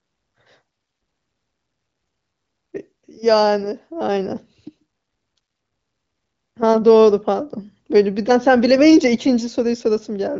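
Nothing stood out on listening; the speech carries the expected top end near 7 kHz of AMR wideband (HD Voice) coding at a high rate, with no events anywhere in the clip calling for comment.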